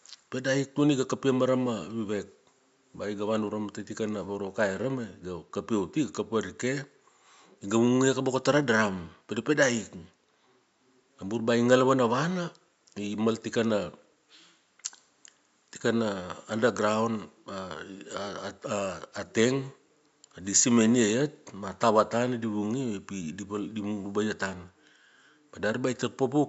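No technical faults can be heard in this speech recording. A faint room noise sits underneath it, about 48 dB below the speech, and belongs to the recording space rather than to any fault in the system.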